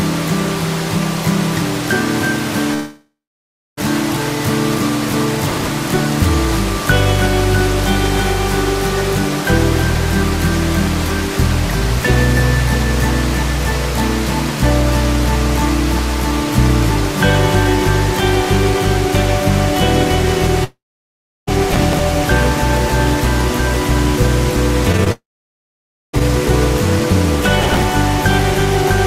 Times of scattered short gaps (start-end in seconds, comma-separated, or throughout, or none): 24.92-26.22